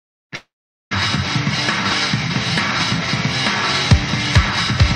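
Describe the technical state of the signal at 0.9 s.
At 0.9 s the signal sits near the end of a long network dropout, from 0.35 to 0.93 s, likely caused by packets failing to arrive. The receiver stretched the last sound into a fading buzz, then left silence for about 0.43 s; audio resumes at 0.93 s without the lost stretch.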